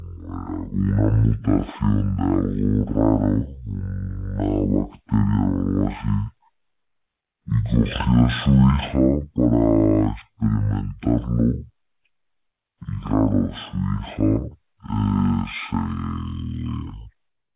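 Throughout the clip, a wrong sample rate fault means the samples run out at half the rate they were captured at, with no conversion, which fits 16 kHz audio played at 8 kHz. The speech is slowed to half speed and dropped a full octave, sounding low and dragging.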